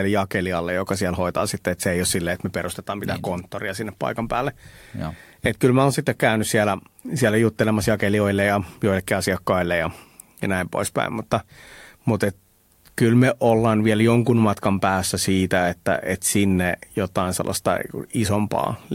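No technical faults can be heard anywhere in the speech recording. There is nothing in it to place on a timeline or to trace back to a cause.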